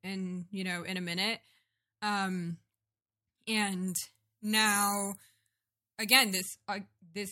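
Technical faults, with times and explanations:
3.88 to 6.41 s, pre-emphasis left on: the speech turns thin, bright and sibilant because a treble boost following the FM 75 µs curve was never undone by its matching de-emphasis, leaving 10 kHz about 14 dB hotter relative to 1 kHz.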